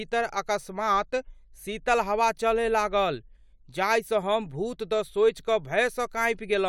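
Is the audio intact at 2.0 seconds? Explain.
Yes, at 2.0 seconds the speech plays through cleanly, with no dropout, click, distortion or other fault to be heard.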